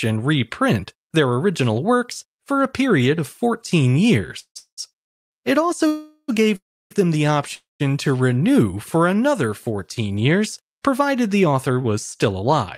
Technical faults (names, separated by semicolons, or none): call audio freeze